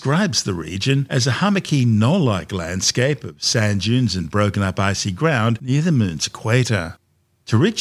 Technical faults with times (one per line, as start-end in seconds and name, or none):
none